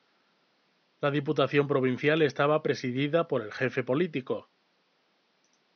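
There are no technical faults to describe in time order in this speech recording, and the faint room noise sits about 44 dB below the voice.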